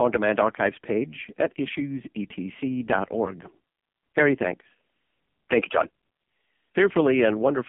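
From start to finish the speech has gone through the AMR narrowband mobile codec, and hard. Nothing above 3.5 kHz, a thin 200 Hz to 3.4 kHz phone band, and a buzzy, synthetic vocal-tract rebuild that points to one of the lowest AMR-NB modes, around 5.15 kbps.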